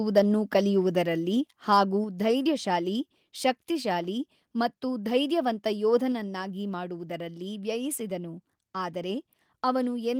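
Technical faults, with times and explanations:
0.17–0.19 s and 1.72–1.78 s, microphone overload: two brief bursts of harsh, crackly grit land on the loudest peaks, the second just before "ಧೈರ್ಯಶಾಲಿ ಶಕ್ತಿಶಾಲಿ ಮತ್ತು ಧೈರ್ಯವಂತ". The signal tries to go about 2 dB past full scale. The converter cannot follow, so the waveform tops are sliced flat, which adds the hard edge. The likely cause is input gain set too high. A noticeable share of samples is flattened in the first burst and fewer in the second.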